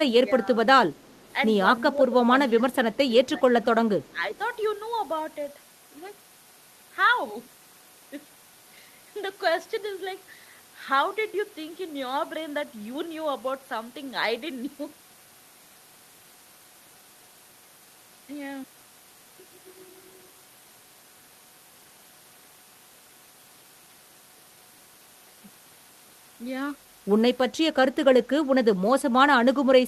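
The speech dips briefly from 0.23 to 0.55 s. It happens again from 1.97 to 2.16 s, 2.87 to 2.98 s, 3.37 to 3.43 s and 4.11 to 4.23 s. This is speech suppressed in double talk. The first two dips are shallow. The later ones go deeper, with the level pulled down noticeably. The likely cause is an echo canceller that heard both sides at once. It could not tell this talker from the loudspeaker's echo, so it turned everything down.

At 0.95 to 1.35 s, and again at 4.04 to 4.13 s, a very faint delayed copy of the speech trails behind. It arrives 342 ms late. This is echo leak. The far end likely plays the call on a loudspeaker, and its echo canceller missed part of what its microphone picked up. That leftover was sent back and is heard as a quiet repeat.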